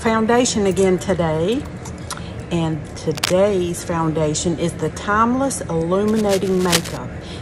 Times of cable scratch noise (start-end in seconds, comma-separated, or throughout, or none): 3.15-3.36, 6.07-6.97